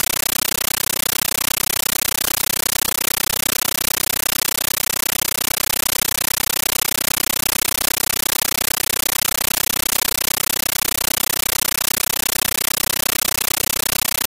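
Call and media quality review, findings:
Very loud, harsh chattering static for the whole clip, replacing the sound entirely. It pulses at 31.25 Hz: each noise burst lasts about 13.3 ms, then silence until the next. Compressed stream played as audio. An AC-3 bitstream on the S/PDIF or HDMI link is being treated as PCM by the sink, so each undecoded frame is heard as a noise burst plus its zero padding. Burst density fits a 640 kbps stream.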